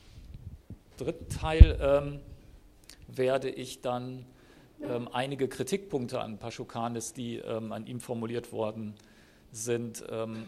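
Single sharp clicks occur at 1.63, 3.43, 6.15 and 8.43 s, each a thin vertical line across the spectrum. These are likely dropped samples: well under a millisecond of the stream goes missing, so the waveform jumps abruptly without removing any audible sound.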